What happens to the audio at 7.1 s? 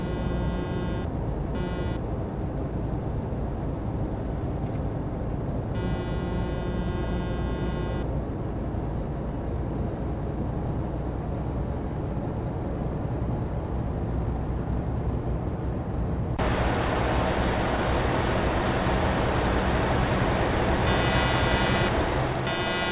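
Nothing goes wrong at 7.1 s; the audio carries straight through that moment, with its content stopping at about 4 kHz, as expected from the narrowband G.711 A-law call path it travelled over.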